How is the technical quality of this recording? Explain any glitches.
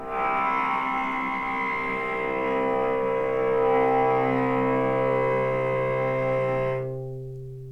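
No technical faults can be heard anywhere in the recording, so there are no glitches to explain.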